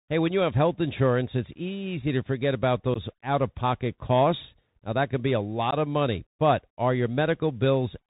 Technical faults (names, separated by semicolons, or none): Bluetooth CVSD headset codec; unconcealed Bluetooth headset packet loss